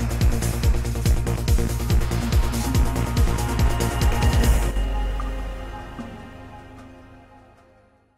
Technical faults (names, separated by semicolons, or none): one channel drops out